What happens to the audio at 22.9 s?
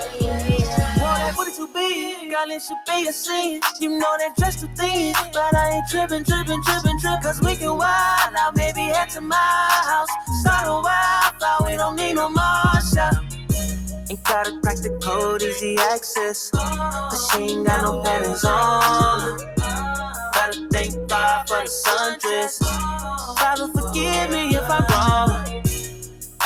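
At 22.9 s you're hearing the same thing that runs through the whole clip: a noise suppressor applied to music or sounds. It's treating sustained tones and tails as noise and ducking them by around 5 dB, so held parts sink and pump while attacks punch through.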